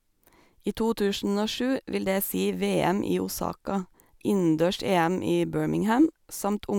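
A speech recording, with nothing technically wrong with it at any point.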